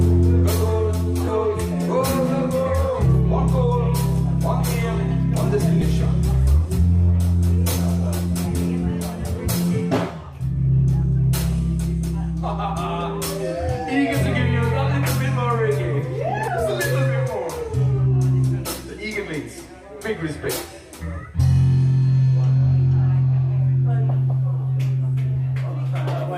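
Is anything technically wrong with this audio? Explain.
Yes. The audio has compressed frames skipped at four points: 1.27, 5.81, 8.45 to 8.48 and 16.47 to 16.50 seconds. Whole blocks of coded audio never play, so the sound jumps forward. The gaps are about 300 ms at the first point, about 100 ms at the second, about 70 ms at the third and about 100 ms at the last. The jumps fit a codec using 20 ms frames.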